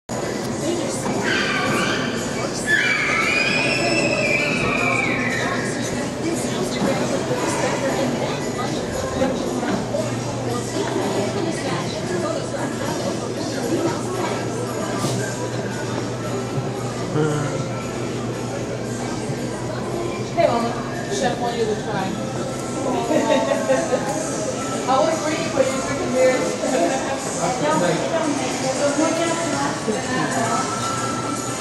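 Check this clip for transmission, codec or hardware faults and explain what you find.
No faults can be heard anywhere in the clip.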